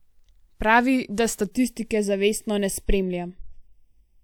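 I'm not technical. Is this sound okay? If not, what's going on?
No. Channel delay (comb filtering) starts at 1.45 s and lasts to the end. One side of the speech arrives a fraction of a millisecond late, and when both sides are combined, some pitches cancel, starting around 1.5 kHz, so the voice sounds hollow and phasey.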